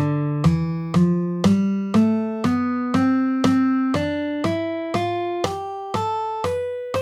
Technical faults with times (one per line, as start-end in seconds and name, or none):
none